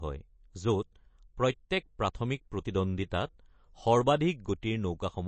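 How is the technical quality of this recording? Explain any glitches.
The recording is noticeably degraded by lossy coding throughout. The speech was likely squeezed through MP3 compression at a low bitrate, around 32 kbps judging by the damage. Short of bits, the encoder drops everything above about 8.3 kHz and switches weak frequency lines on and off frame by frame, so the speech sounds dull, watery and swirly, with chirpy s sounds.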